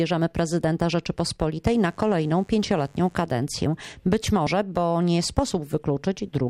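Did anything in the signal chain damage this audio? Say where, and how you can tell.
Yes, in the analogue wiring. Between 1.70 and 3.20 s a mains buzz rides under the sound: a steady, raspy tone built on 50 Hz, sitting roughly 35 dB below the signal. Its edgy texture points to sharp switching spikes, such as from a dimmer, rectifier or poorly shielded cable, coupling into the line twice per mains cycle. Those spikes spread energy into 50 Hz harmonics reaching several kilohertz, which is why it rasps rather than hums.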